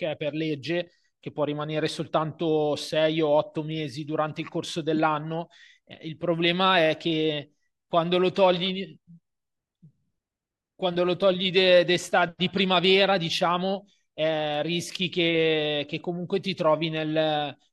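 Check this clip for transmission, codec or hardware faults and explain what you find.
One codec fault is audible in this speech clip. At 12.58 s there is a corrupt frame decoded: a single compressed frame arrived with flipped bits and was played anyway, so misread gains and codes placed energy at wrong frequencies, producing a brief chirp, squeak, blip or burst of noise peaking around -20 dBFS.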